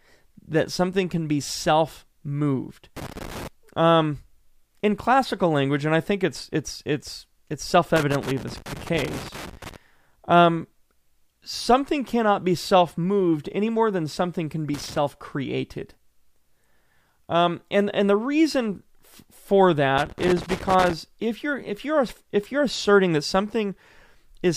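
Four bursts of loose connector crackle break up the speech: 2.97 to 3.47 s, right after "can be self moved"; a longer one from 7.96 to 9.76 s following "it's it's it's it's"; a short one from 14.74 to 14.98 s; and 19.98 to 20.93 s, just before "if you're if you're". Each is a worn or dirty contact making and breaking as it shifts, so the signal gets chopped into an irregular, scratchy crackle.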